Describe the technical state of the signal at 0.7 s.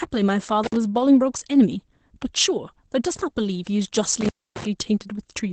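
At 0.7 s the signal is inside an intermittent contact fault running from 0.64 to 0.76 s. A loose connection opens for about 54 ms. The speech drops out abruptly with crackle at both edges, and only faint hiss remains while the line is open. The crackling edges and the leftover hiss set it apart from a clean digital dropout, which falls to silence without contact noise.

Opus voice compression also runs through the whole clip, including this moment. The speech is coded with the linear-prediction SILK coder, and nothing is present above about 8.8 kHz, so the top end is clipped off. The excitation is coded coarsely, which fits a bitrate around 12 kbps. The speech sounds muffled, slightly hoarse and faintly robotic. The hard ceiling in the spectrum separates this from simple low-pass filtering, which rolls off gradually and leaves no coding roughness.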